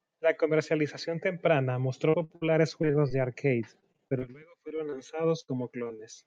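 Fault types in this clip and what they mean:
repeated packet loss (robotic sound): choppy stretches around 2.1 to 2.4 s, 2.8 to 3.1 s, 3.8 to 4.9 s and 5.4 to 6.0 s, where lost packets were patched by extending the previous sound.
jitter buffer slow-down: from about 2.2 to 3.0 s the speech drags at 96% speed, stretched by roughly 46 ms as the receiver repeated pitch periods to rebuild its buffer.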